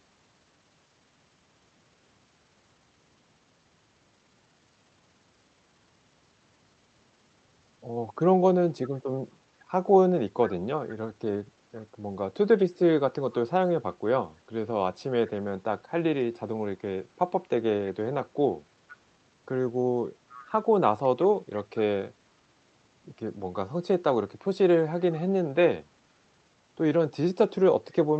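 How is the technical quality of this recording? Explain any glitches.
The recording has one kind of glitch, an echo leak, in three brief spots of this speech clip: 18.88–18.97 s, 20.29–20.47 s and 21.03–21.08 s. The far end's echo canceller likely let loudspeaker sound reach its microphone and travel back. A faint copy of the speech returns about half a second late, well below the speech level and weakest in the last spot. The Opus call path, with its 8 kHz bandwidth, adds its usual band-limited coding character.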